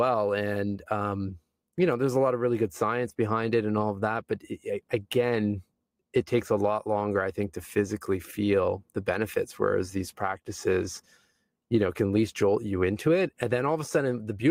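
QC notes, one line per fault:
9.99–11.33 s, call bitrate drop: the speech turns coarser and rough or watery for about 1.3 s, then clears. The encoder was starved of bits after a bandwidth estimate fell, which fits a cut from 32 to 18 kbps.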